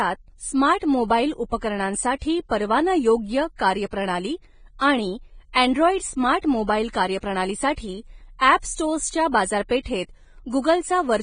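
From start to finish, the speech carries heavy Vorbis compression damage. Nothing is heard above about 9.7 kHz, so the top of the spectrum is simply missing. The treble that remains sounds hissy and grainy. Tones are roughened and attacks are blurred. The likely cause is a low-quality Vorbis encode, and the damage fits a bitrate near 21 kbps. At that rate, fine treble detail was quantised so coarsely that it turned into noise of similar energy.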